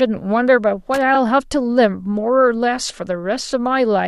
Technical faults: loose connector crackle; repeated frames

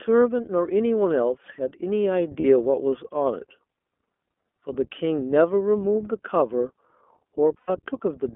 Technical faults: iLBC codec; lost iLBC frames

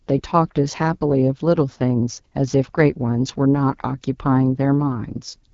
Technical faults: AMR wideband (HD Voice) codec

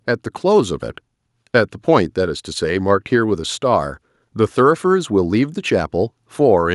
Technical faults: none

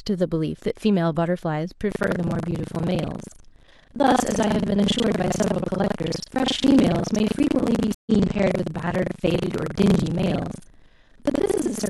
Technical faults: buffer tearing; stream reconnect

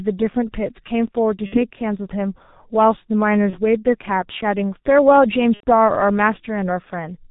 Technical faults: G.723.1 codec; VoIP packet loss concealed by the speech codec

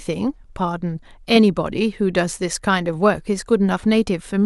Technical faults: none

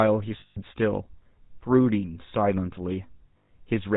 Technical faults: GSM full-rate codec; lost GSM frames

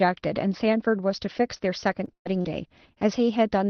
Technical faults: repeated packet loss (robotic sound)

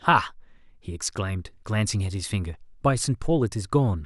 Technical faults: none

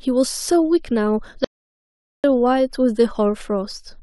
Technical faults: audio dropout to silence

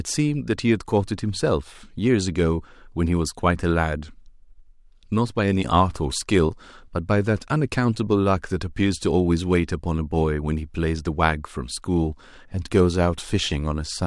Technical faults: none

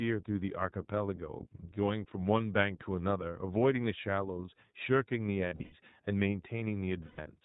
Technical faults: iLBC codec; lost iLBC frames

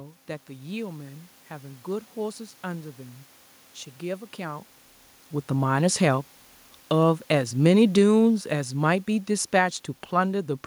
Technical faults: automatic gain falling

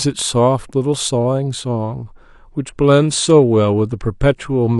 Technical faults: adaptive stream at a lower bitrate

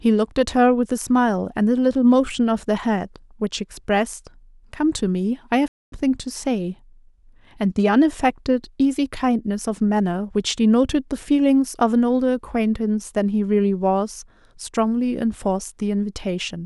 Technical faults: playback stall

